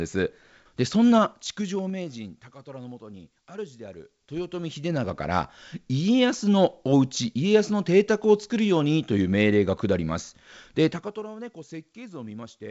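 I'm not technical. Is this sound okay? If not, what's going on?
No. Between 10.87 and 11.24 seconds there's zipper noise. The volume gets pulled down a long way, but instead of sliding smoothly it drops in lots of tiny stairs, roughly thirty a second. Each little jump puts a small click into the speech, so those clicks run together into a fast ticking or zipping sound laid over the voice while the level falls.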